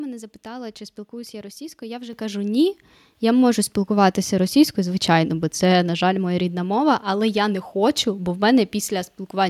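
At 2.13 s the microphone volume gets stepped up: the call software decided the input was too quiet and raised the device gain by about 8 dB in one go. Voice and room noise jump louder together, right before "кажу ні".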